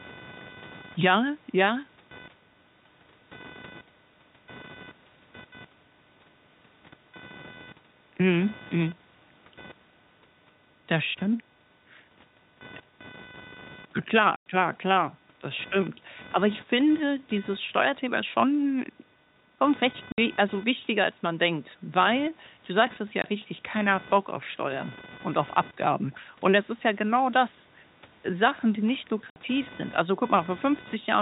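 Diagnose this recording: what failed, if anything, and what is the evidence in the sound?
In the analogue wiring, the audio circuit shares a ground with the computer, and load changes from the processor, graphics card or mouse shift that ground. The result is computer activity noise that runs through the whole speech recording: a buzzing, chirping texture pulsing at roughly 500 Hz, sitting about 25 dB below the speech. It rises and falls with the machine's activity rather than with the talker, which is what separates it from acoustic background.

On the network, packets went missing and the receiver played silence in their place. This packet loss filled with silence cuts hard-edged holes at 14.36–14.46 s (100 ms, just before "klar klar das stimmt"), 20.12–20.18 s (60 ms, between "schon recht" and "also wichtiger als man"), 23.22–23.24 s (20 ms) and 29.30–29.36 s (60 ms, between "die nicht" and "sind also"). 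Every gap is a multiple of 20 ms, which fits 20 ms packets.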